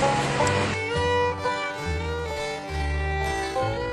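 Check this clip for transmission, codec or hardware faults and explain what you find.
One fault: a time-stretched section from 1.0 s to the end. Playback slows abruptly to about 0.59x and drags while pitch holds, unlike a sample-rate error. The likely cause is software repeating short pieces to lengthen it.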